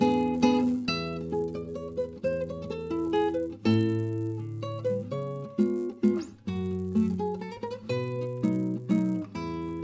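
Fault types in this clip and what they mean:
Resampler restarted on every block: a steady 100 Hz buzz rides under the sound wherever there is signal. Each 10 ms block was converted in isolation, likely from 24 kHz down to 16 kHz, so every block edge carries a small error that repeats.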